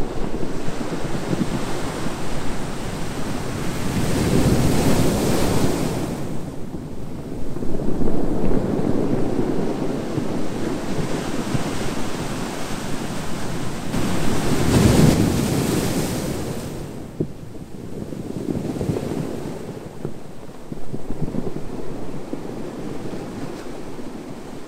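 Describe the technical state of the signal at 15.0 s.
At 15.0 s the signal sits inside a sudden gain jump running from 13.93 to 15.14 s, about 6 dB up. Everyday sound and background noise step up together, which separates it from a louder source; a gain change applied without a ramp is the likely cause.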